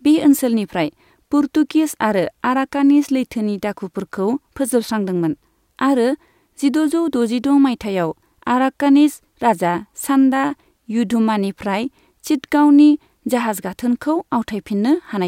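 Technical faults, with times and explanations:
Nothing technical stands out here; the speech comes across with no audible faults at any point.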